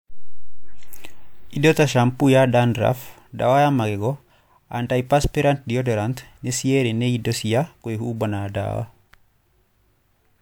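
No technical faults can be heard in this recording.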